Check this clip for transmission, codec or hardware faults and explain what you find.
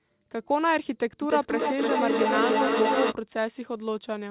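There's one clear fault: a feedback echo between two devices, running from about 1.22 s to 3.17 s. The speech comes back roughly every 300 ms, and the repeats get up to about 1 dB above the speech itself, so they stack on top of each other instead of fading out. That happens when two devices in the same room are on the call: one plays the other's audio, the other's mic hears it and sends it round again, and neither echo canceller touches sound it didn't play itself. Each pass sounds thinner and more ringing, all within the telephone-band sound of the call path, where nothing gets above 4 kHz, which fits a G.711 mu-law codec.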